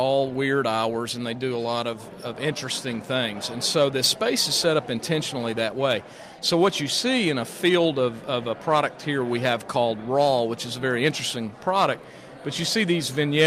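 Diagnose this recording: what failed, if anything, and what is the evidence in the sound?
Listening through the recording, nothing stood out that would point to a failure at any stage of the chain.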